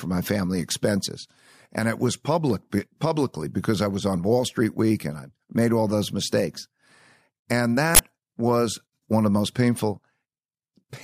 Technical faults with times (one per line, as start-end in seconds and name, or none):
7.95-7.99 uninitialised buffer